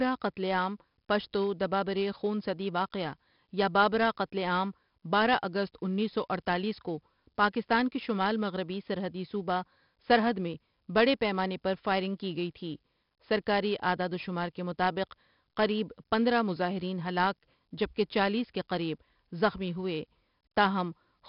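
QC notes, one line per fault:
throughout, 4-bit ADPCM compression: heavy gritty hiss tracks the speech level and attacks distort as the step size lags; nothing above 5.3 kHz, pointing to a low sample rate.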